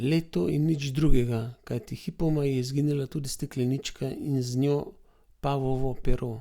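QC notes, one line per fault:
No faults found.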